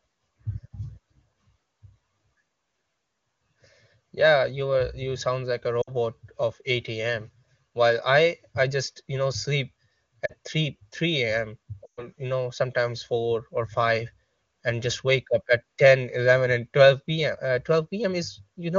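Around 5.82 to 5.94 s, 10.26 to 10.32 s and 11.86 to 12.08 s you get lost AMR speech frames. The decoder covers each gap by reusing the last good pitch and vocal tract settings with the gain dropping away. The short ones, about 60 ms and 40 ms, drop to near silence within two frames. The longest, about 120 ms, fits a run of six 20 ms frames, so the sound drops to near silence within two frames before it comes back a bit rough.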